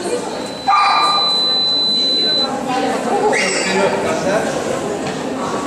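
Loudspeaker feedback squeal from 0.35 to 2.50 s: a microphone hears its own loudspeaker, and a 4 kHz tone swells over roughly a second to a shrill howl a few dB above the sound.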